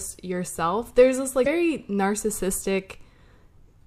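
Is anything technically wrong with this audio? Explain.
Yes. The speech has one brief fault, from 1.43 to 1.47 s. It is damaged data in a compressed stream. Corrupted bytes there make the decoder misread the frame and lose sync until it finds the next frame header. It is heard as a short chirp, squawk, click or hole.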